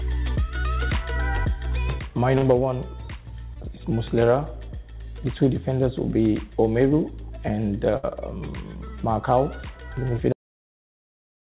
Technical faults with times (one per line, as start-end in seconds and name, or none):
2.38-2.44 short concealed packet loss
3.54-3.57 short concealed packet loss
7.97-8.12 burst of packet loss
10.32-11.44 cut-off end